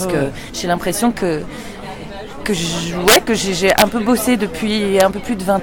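Integer overflow strikes three times. At 3.08 to 3.16 s, peaks pushed about 5 dB past the limit wrap to the opposite sign. The signal jumps across the full range instead of being held at the ceiling. This gives a violent crack, harsher than clipping. At 3.70 to 3.82 s it happens again, about 3 dB over. At 5.00 s a brief peak just reaches the limit and flips. That leaves a sharp crack.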